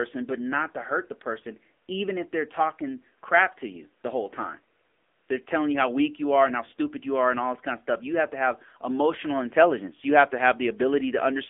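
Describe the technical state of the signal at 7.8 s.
At 7.8 s the speech carries AMR narrowband mobile codec damage, present throughout the clip. Content is confined to roughly 250 Hz to 3.5 kHz, and the low-rate vocal-tract model leaves a plainly audible buzzy, synthetic quality, which fits the 7.95 kbps AMR-NB mode.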